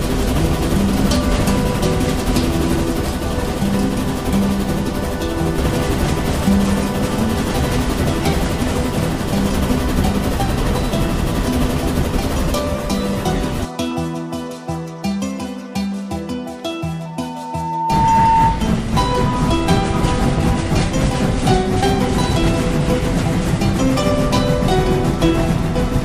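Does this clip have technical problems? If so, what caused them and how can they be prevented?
Yes. From 17.05 to 18.71 s there is loudspeaker feedback squeal: a single steady tone at 904 Hz swells over roughly a second until it stands about 5 dB above the rest of the audio. The microphone is picking up its own loudspeaker, and at 904 Hz the loop gain passes one, so that frequency keeps feeding itself. A fixed pitch that grows on its own marks it as feedback rather than an interfering hum or test tone. Lowering speaker gain, moving the microphone out of the speaker's coverage, or notching 904 Hz prevents it.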